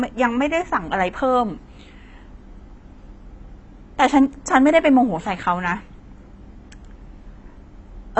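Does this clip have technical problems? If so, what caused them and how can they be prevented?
Yes. Throughout the speech there is nothing above about 8.1 kHz, and the remaining band sounds dull and smeared, with a fizzy, warbling texture on sibilants and sustained vowels. This is likely AAC compression. The encoder quantises each frame's spectrum against a hearing model, and when bits are scarce it drops the top band and coarsens or noise-fills the rest. The degree of damage fits AAC-LC at roughly 24 kbps. To prevent it, encode at a higher bitrate or keep an uncompressed copy for delivery.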